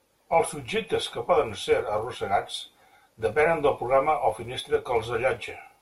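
Throughout the speech, a filter restarted on every block. It drops its memory at each block boundary and starts again from silence. Each restart leaves a small transient. Together they form a buzz near 188 Hz, which fits a 256-sample block. The buzz rises and falls with the level of the speech.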